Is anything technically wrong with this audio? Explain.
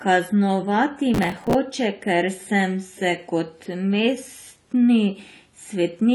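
Yes, there are two faults.

Throughout the speech, nothing is present above about 11.5 kHz, and the artefacts of the earlier coding remain. The file is a high-bitrate MP3, so this is likely low-bitrate audio saved at a high bitrate. An earlier encode, which sounds like a low-rate AAC around 32 kbit/s, discarded that detail, and re-encoding at 320 kbit/s keeps its cut-off and artefacts without restoring anything.

From 1.14 to 1.54 s there is processor overload crackle, a gritty tearing laid over the speech for about 0.4 s. The processing fell behind and missed a run of deadlines. The spacing of the clicks fits buffers of around 5 ms, with roughly twenty missed. Each miss replayed a stale buffer of old audio with hard edges, and the crackle stops once the load clears.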